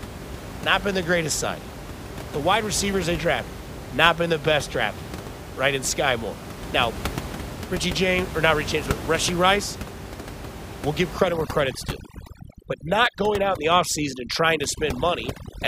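From 11.17 s, right after "we'll give", to the end at 15.68 s, the background drops and breaks up into twinkling specks. This is overdone noise removal. A noise reduction stage set too strong cuts individual frequency bands down or out whenever they sit near its noise estimate. With the room noise only about 11 dB below the speech, quieter parts of the voice fall inside that estimate and are stripped away too.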